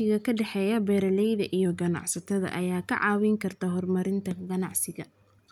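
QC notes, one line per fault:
1.65–2.52 s, drift correction step: clock-matching software likely dropped the playback rate 5.74% in one step to rebalance its buffer. After "ka dhexeeya beeralayda" the speech slows and sinks 102 cents, about a semitone, then snaps back to normal speed and pitch before "ayaa ka".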